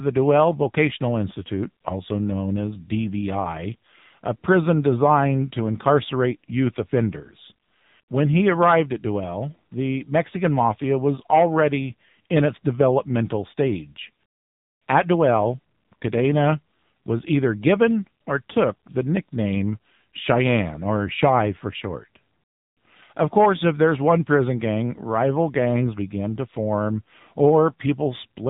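Throughout, the speech sounds thin, buzzy and synthetic, with nothing above about 3.8 kHz: the AMR narrowband mobile codec at work. Its vocal-tract model, rebuilding each frame from a few pulses, is plainly strained, which points to a low bitrate near 7.4 kbps.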